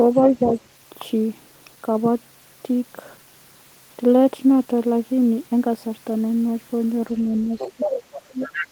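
An echo canceller that likely failed to fully remove the far end's loudspeaker sound lets the other side's voice leak through from 0.16 to 0.58 s, a faint second voice about 15 dB under the talker. From 7.19 to 7.98 s, with both sides talking at once, the canceller likely turns everything down, so the speech is suppressed in double talk: it dips by about 10 dB, in patches totalling roughly 0.3 s. The other side's voice then likely leaks through again from 7.58 s until the clip ends, louder this time at about 10 dB below the speech. Within that stretch, from 8.3 to 8.65 s, a further double-talk suppression, likely from the same canceller, pulls the talker down by about 15 dB for around 0.2 s.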